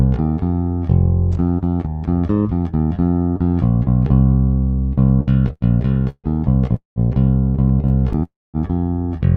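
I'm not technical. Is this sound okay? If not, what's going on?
No. There are two kinds of problem, both typical of an internet call.

The first is repeated stalls, or stutter. From 5.07 to 6.27 s the sound keeps catching. It pauses 11 times, the longest pause about 0.15 s. For about a third of that stretch, the sound is being stretched to fill the waits. The same thing happens more gently from 7.68 to 8.22 s, with 6 tiny catches of up to 30 ms. The data was arriving more slowly than it was being played. Each time it ran out, the receiver repeated the last bit of sound until more came. Nothing is lost, but the sound drags and hiccups.

The second is a call audio freeze, which happens twice. From 6.76 to 6.99 s the sound hangs for about 0.2 s. It trails off and then goes quiet for about 0.13 s. From 8.23 to 8.57 s it hangs for about 0.3 s, with about 0.22 s of silence. The likely cause is that the data was held up on the way. 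After each freeze the sound picks up exactly where it stopped. A gap has been added, and nothing is skipped.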